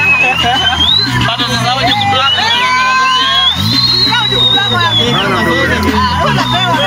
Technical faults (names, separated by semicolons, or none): timecode bleed